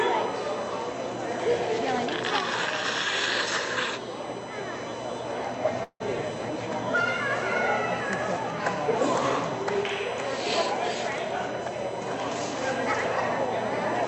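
A USB whine runs through the whole clip. It sits at a fixed 1 kHz, with its strongest harmonic at 3 kHz, roughly 20 dB below the sound. Current drawn in the bus's 1 ms frames is leaking into the power or ground. It is heard as a thin, steady tone.

From 5.83 to 6.02 s there is a call audio freeze. The last sound is stretched into a fading buzz, then about 70 ms of silence. Delayed packets likely emptied the jitter buffer. About 166 ms of gap was inserted, and nothing is lost. Playback then resumes exactly where it stopped, above a spectrum that tops out near 8 kHz from the call codec.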